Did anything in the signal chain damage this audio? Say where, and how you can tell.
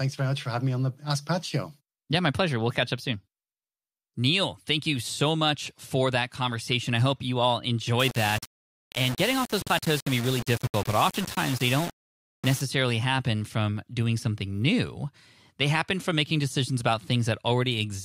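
Yes. From 8.00 to 12.61 s, after "I hope you all", the speech turns grainy with distortion that follows the signal. This is low bit depth without dither, likely from undithered rounding to about 4 bits during sample-format conversion.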